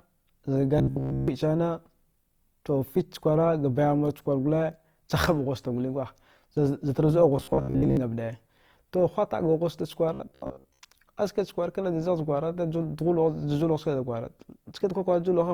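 Speech, grainy and rough throughout, likely from Opus compression in its music mode at a low rate near 24 kbps. Unlike MP3's swirling holes, bands are noise-filled and stay full-range. At 0.78–1.28 s, 7.37–7.97 s and 10.14–10.80 s there is a robotic sound from repeated short buffers: a rigid metallic buzz fixed near 67 Hz, likely from roughly 15 ms chunks replayed over most of each stretch. The fixed pitch sets it apart from codec roughness.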